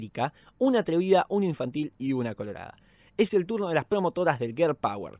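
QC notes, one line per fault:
No fault found in this speech clip.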